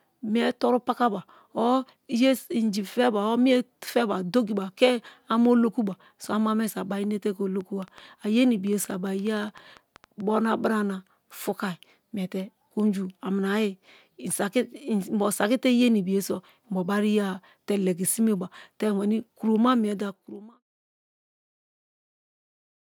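From 7.61 to 10.21 s, a train of clicks, about 20 irregular ticks near 7 per second at roughly speech level, likely from interference, shows as thin vertical broadband lines and waveform spikes.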